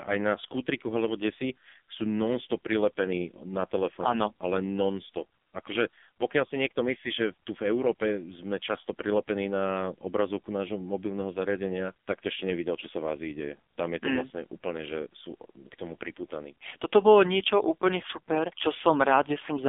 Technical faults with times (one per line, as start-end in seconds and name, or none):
0.00-19.68 AMR narrowband mobile codec